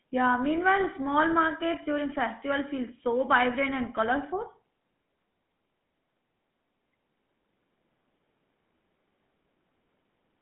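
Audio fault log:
Throughout, GSM full-rate codec: speech gets that buzzy, gravelly edge from pulse-driven excitation, with the band squeezed to about 150 Hz–3.4 kHz, which fits 13 kbps.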